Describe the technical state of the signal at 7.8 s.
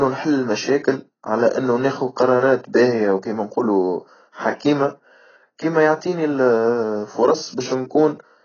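At 7.8 s the speech carries AAC compression damage, as it does across the whole clip: nothing above 6.8 kHz, dull, smeared sibilants and a warbling texture. The likely cause is AAC-LC coding heavy enough to suggest a bitrate near 13 kbps.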